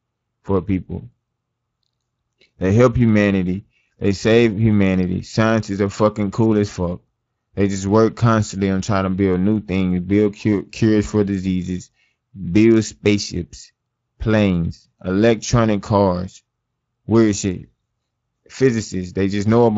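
Speex codec damage runs through the whole speech clip. Too few bits for the excitation leave voices grainy and hoarse. The sound suggests roughly 20 kbps.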